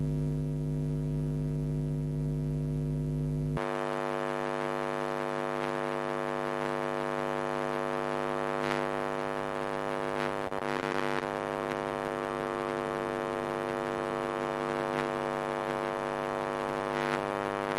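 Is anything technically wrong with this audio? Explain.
Yes. From 10.47 to 11.23 s, repeated packet loss (robotic sound) occurs. Short dropouts, the longest about 32 ms, are patched by stretching the previous sound, which makes it choppy.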